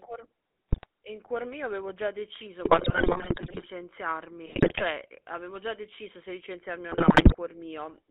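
From the start the speech carries the GSM full-rate codec's gravelly, buzzy texture, squeezed into a telephone band of roughly 250 Hz to 3.5 kHz. The coder rebuilds the voice from a vocal-tract filter excited by a sparse, regularly spaced pulse train, which fits the 13 kbps full-rate scheme. That is why the roughness sits inside the voice itself. It is not the hiss of added noise or the watery swirl of a modern low-bitrate codec.

GSM bit errors then break through in four bursts. The first runs from 0.69 to 0.86 s, just before "in cuor mio avevo". The longest runs from 2.64 to 3.67 s. The third runs from 4.46 to 4.84 s, right before "avevo già deciso se". The last runs from 6.92 to 7.35 s, just after "deciso se licenziarmi o". Corrupted filter, pitch and gain values bend the spectrum and jolt the level frame by frame, producing squawks, pops and gargling. Packet loss, by contrast, would leave gaps or smoothed-over repeats.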